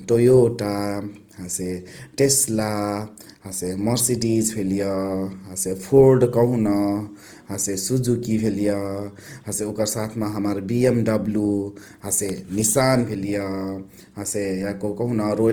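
Throughout, the speech sounds grainy and rough, likely from Opus compression at a low bitrate near 24 kbps; the spectrogram shows noisy, filled-in bands reaching about 20.1 kHz.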